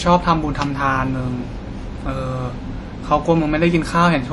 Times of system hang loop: none

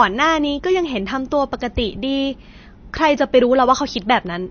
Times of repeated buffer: none

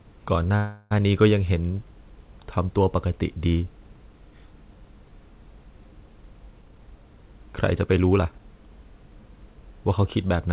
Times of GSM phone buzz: none

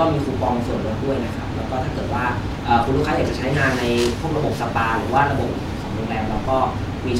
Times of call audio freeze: none

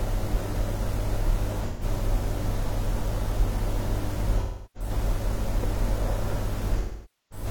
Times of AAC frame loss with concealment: 1.67-1.83, 4.40-4.89, 6.79-7.46

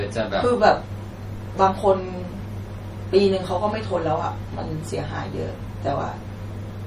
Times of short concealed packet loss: none

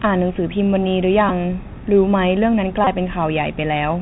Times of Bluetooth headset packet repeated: 1.29-1.31, 2.84-2.87

